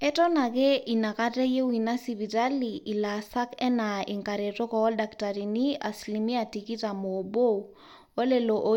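No technical faults can be heard anywhere in the speech recording.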